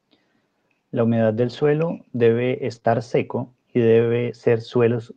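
Lost packets rebuilt from error correction occur in this speech clip at 1.37 to 1.63 s, 2.51 to 2.77 s and 2.83 to 2.97 s, the last two just before "seco y". In each stretch the decoder played low-bitrate copies carried in the following packets, so there is no gap, but the rebuilt frames sound rougher and noisier. The first two rebuilt runs are 140 ms long, which fits about seven lost packets, and the third is 80 ms. Short concealed packet loss falls between them at 2.79 to 2.83 s, also just before "seco y". About 20 ms of audio arrived too late, and the receiver filled the hole by extending the preceding sound before blending back, leaving a brief smear or wobble.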